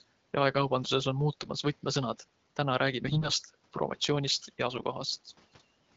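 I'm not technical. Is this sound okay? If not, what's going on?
No. The speech turns briefly hoarse and gargly from 1.34 to 1.50 s, 3.06 to 3.34 s and 4.71 to 4.83 s. These are AMR bit errors: over a weak phone link, some of the less important data arrived damaged, so the voice kept its pitch but sounded scratchy.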